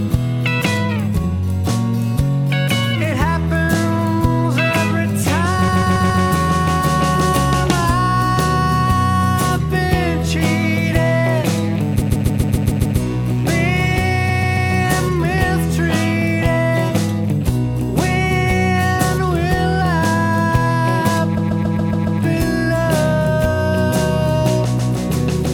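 From 5.67 to 6.23 s, repeated frames make the same 139 ms block play four extra times. A run of compressed frames was duplicated, so the decoder loops it, producing a stutter. On a waveform, identical blocks sit side by side. From 10.71 to 15.04 s, a mains buzz sits about 25 dB below the sound. Switching spikes twice per 60 Hz cycle produce a steady, raspy tone, which shows as evenly spaced horizontal harmonic lines climbing into the kilohertz range. Within that stretch, further stutters occur at 12.01–12.98 s (seven extra plays) and 14.28–14.70 s (three). Later ones follow at 21.36–22.20 s (six) and 24.78–24.92 s (one), each stretching the audio by the repeated time.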